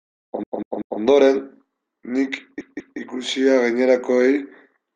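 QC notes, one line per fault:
0.43–1.01 s and 2.61–2.99 s, repeated frames: the same 192 ms block of speech plays back-to-back, three extra times in the first run and twice in the second. It sounds like a stutter, not an echo, because each repeat is an exact, undecayed copy that adds length rather than overlapping the original.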